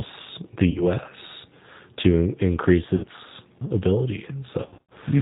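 G.729 codec, throughout the clip: the speech has the slightly rough, synthetic quality of a low-rate codec that rebuilds each 10 ms frame from a vocal tract filter, a pitch predictor and a handful of pulses. Nothing above 4 kHz comes through, so the voice sounds narrow and dull, and the coding damage is plainly audible. The character points to G.729A at 8 kbit/s.

VoIP packet loss concealed by the speech codec, from 0.70 to 0.84 s and from 2.95 to 3.06 s: audio goes missing and the decoder fills the gaps by repeating its last pitch and filter at falling gain. The first gap fits about 50 ms of lost audio and the second about 80 ms. Each is smeared into a brief, fading stretch of synthetic sound, and the speech stays weakened for a moment after the signal returns because each frame builds on the one before.

The same packet loss returns, worse, from 4.63 to 4.93 s: about 220 ms of audio is missing, scattered over roughly 280 ms, with the longest unbroken gap lasting 70 ms. 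Repeated concealment turns this stretch into choppy, fading fragments.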